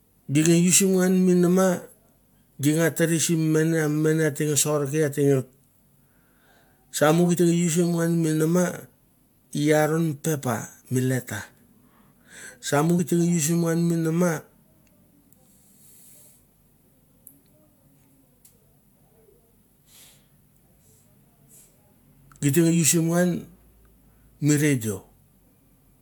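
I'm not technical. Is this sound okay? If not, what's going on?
No. Compressed frames were skipped at 7.36 s and 12.98 s: a tiny slice of the speech, about a fiftieth of a second, was lost or rejected as damaged, so the audio jumps ahead.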